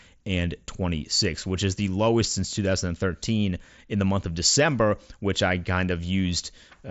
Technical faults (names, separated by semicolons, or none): none